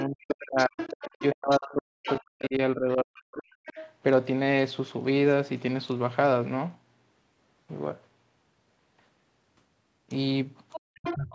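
Other side's voice leaking through appears at 0.0, 0.58–1.58 s, 2.04–2.46 s, 3.66–3.91 s and 10.72 s to the end. A second talker sits roughly 10 to 20 dB below the speech, likely loudspeaker echo the canceller left in. Speech suppressed in double talk occurs at 0.06–0.79 s, 1.18–3.5 s and 10.99–11.32 s. The main voice dips by up to about 40 dB or cuts out in pieces, likely because the canceller ducked everything while both sides overlapped.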